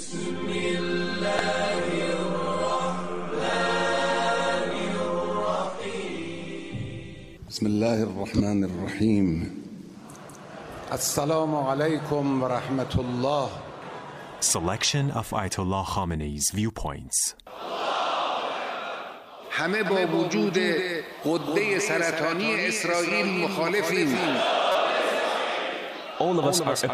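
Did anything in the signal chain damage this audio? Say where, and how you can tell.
Yes. Damaged data in a compressed stream, at the codec or storage stage, shows up three times: a brief blip at 1.39 s, then short glitches at 8.37 to 8.40 s and 24.72 to 24.76 s. Each is a sharp, non-acoustic glitch lasting between about 6 and 36 milliseconds. Corrupted bytes made the decoder misread those frames, lose sync and skip forward to the next valid frame header.

A doubled audio track appears from 19.86 s to the end. A second, full-band copy trails the original by roughly a fifth of a second at about 5 dB lower level. It has no decay or room colouring, and it cuts in abruptly rather than building up like a reflection. The likely cause is a second capture through a slower path, or an edit that left two copies out of step.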